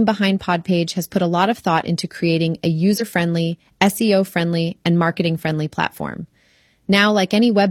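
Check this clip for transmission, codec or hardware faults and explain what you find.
One codec fault is present. From 2.97 to 3.02 s, just after "thought into creating a", damaged data in a compressed stream causes a brief disruption. Corrupted bytes threw the decoder off sync while it hunted for the next frame.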